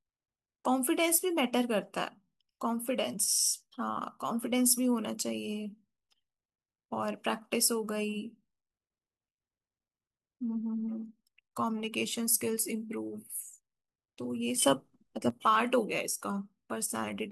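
A gain change was likely applied without a ramp, causing a sudden gain jump of about 8 dB from 14.62 to 15.30 s that lifts the speech and background together.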